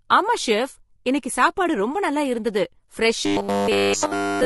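Throughout the speech, harmonics sound rough and grainy, with noise between them and a thin top band; this is likely low-delay AAC compression at a low bitrate, around 32 kbps. A spectrogram shows smeared harmonics and a patchy high band. From 3.26 s to the end at 4.45 s, the speech becomes a rigid metallic buzz at 100 Hz. This robotic sound from repeated short buffers likely comes from a 10 ms block looping across the whole stretch, with the real audio skipped. The waveform repeats roughly every 10 ms, and the spectrogram shows flat, evenly spaced lines.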